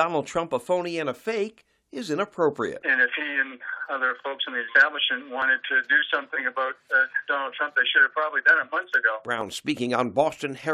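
Overlap between stream segments occurs at 5.42–5.44 s and again at 9.41 s. Adjacent 2-second segments claim overlapping time stamps, so the player trims roughly 20 ms of sound that was never duplicated. The waveform jumps there, heard as a brief click or skip.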